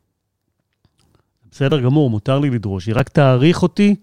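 Speech clip with two repeated-buffer glitches, where fresh audio didn't arrive in time and the device replayed its last chunk. At 1.7 s the repeated piece, consistent with a 5 ms buffer, loops three extra times for a brief buzz. At 2.99 s a single repeat gives a short click.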